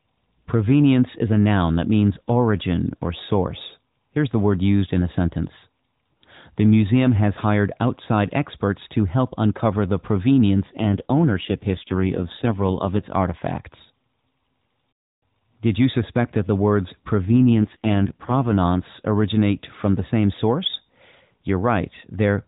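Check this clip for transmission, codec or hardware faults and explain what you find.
Two AMR rate drops are present in this narrowband mobile speech. From 10.68 to 13.07 s, and from 17.27 to 18.58 s just before "originate from the same", the codec falls to fewer bits. The band stays the same and there is no gap, but the voice turns buzzier and more synthetic. That fits a drop from 12.2 to 5.9 kbps.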